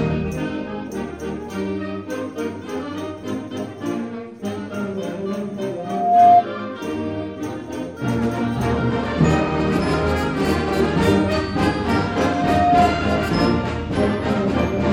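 A single piercing tone at 708 Hz swells up from 5.77 s, reaching its peak in under half a second and sitting around 10 dB above the rest of the sound before it stops at 6.45 s. It returns at the same pitch from 11.84 to 12.96 s, this time climbing more slowly, over about a second. This is loudspeaker feedback squeal: the microphone hears its own loudspeaker, and at 708 Hz the loop gain passes one, so the tone keeps building on itself until the loop is broken.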